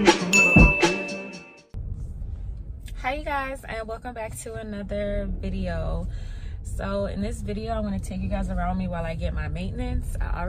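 No technical faults can be heard anywhere in the audio, and the signal stays stable and intact throughout.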